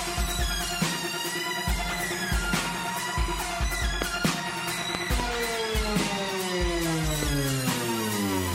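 Loud pops break into the audio: a sharp double pop from 4.02 to 4.27 s, another double from 4.95 to 5.22 s, and a single pop at 7.23 to 7.25 s, each jumping well above the sound, about 20 dB, 20 dB and 15 dB. They are likely voltage spikes from a plug, switch, static or driver glitch.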